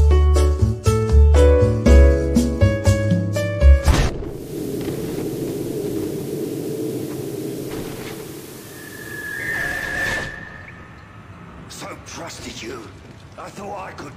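From 4.22 s to 10.03 s the sound turns hissy, with the hiss sitting around 25 dB below the signal, and dips about 1 dB in level. This is digital radio blending to analogue: the receiver lost the digital stream and cross-faded over 376 ms to the station's FM broadcast, then back.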